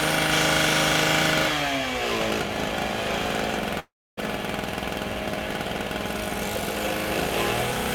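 From 3.79 to 4.19 s, a long network dropout likely cut off the incoming stream, and about 380 ms of audio never arrived. The receiver stretches the last sound into a fading buzz, then about 270 ms of silence follows before the sound resumes, skipping the lost part.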